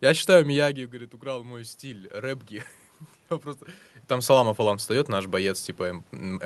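Speech, carried over a call path, with one fault: automatic gain rising. Near 0.5 s the talker moves back, and the input drops by about 12 dB. From 0.59 to 2.52 s the automatic gain control slowly lifts its gain by about 5 dB. Voice and room noise swell together.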